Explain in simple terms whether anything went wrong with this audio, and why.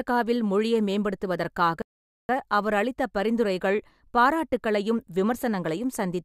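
At 1.82 seconds the speech cuts off in the middle of the flow and stays completely silent until 2.29 seconds, a gap of nearly half a second. This is a playback stall: the player most likely ran short of data or was held up, so the output simply stopped until it caught up. Unlike a brief dropout, it lasts long enough to notice as a hang, and unlike a natural pause it breaks off mid-sound rather than between phrases.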